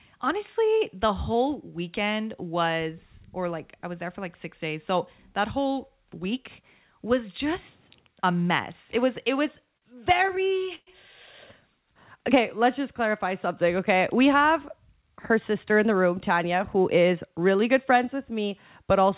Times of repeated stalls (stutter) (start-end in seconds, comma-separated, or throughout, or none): 9.74-10.90